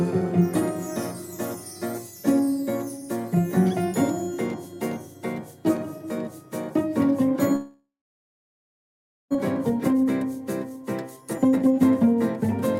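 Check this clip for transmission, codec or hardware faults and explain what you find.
Two problems show up, both in the back half of the clip, and they look connected.

From 7.55 to 9.37 s there's a long network dropout. The sound smears into a buzzy continuation of whatever was last playing, fades out, and leaves about 1.4 s of dead silence before audio resumes. About a second of material never returns, so the playback just skips ahead. The likely cause is packets that stopped arriving, with the receiver's concealment covering the gap until it gave up.

Right after that, from 9.70 to 12.44 s, there's a jitter buffer speed-up. Once delivery caught up, the buffer was holding several tenths of a second more than it wanted. The receiver trimmed that backlog by snipping out tiny pitch-period-sized pieces over and over, roughly 0.7 s in total. Playback runs at about 124% speed but keeps its pitch, so that stretch sounds rushed and a bit clipped in rhythm rather than chipmunky.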